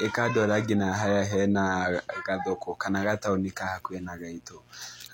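From start to finish there's a mains buzz under the speech, built on 60 Hz. Sharp switching spikes twice per mains cycle leak into the line, stacking harmonics well up into the kilohertz range. The result is a steady, raspy buzz sitting well below the speech.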